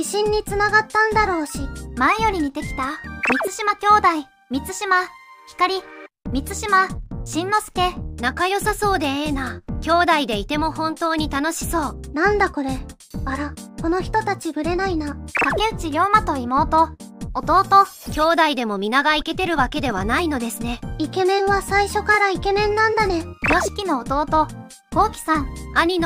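At 22.13 to 22.15 s there is a brief case of repeated frames: one block of compressed audio, 23.2 ms long, was played twice, which points to a single codec frame being delivered again. The duplicate adds 23.2 ms and is heard as a tiny hiccup. Unlike a dropout, nothing goes missing. The same sliver of sound recurs, stretching that moment rather than cutting a gap into it.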